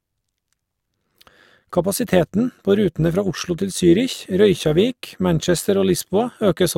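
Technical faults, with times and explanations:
Throughout: overlap-add ripple. The speech was split into windowed frames and rebuilt with overlapping windows whose gains don't sum to a constant, so the level dips and recovers once per frame, by about 6 dB at a rate of around 100 Hz. That fast pulsing gives the voice a rough, metallic buzz. On the waveform the envelope shows a regular scalloped ripple, and a spectrogram shows vertical striping at that frame rate across all frequencies.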